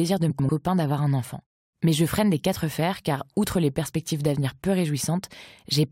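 Frames out of order, from 0.30 to 0.49 s: two adjacent runs of about 93 ms each, consistent with four frames apiece, were decoded in swapped order. The speech in that stretch plays its halves exchanged, giving a garbled flutter, though no time goes missing.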